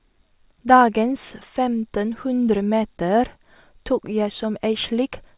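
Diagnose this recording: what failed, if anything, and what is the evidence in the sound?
Nothing failed here: listening across the whole recording, I can't point to any stage of the chain where something went wrong.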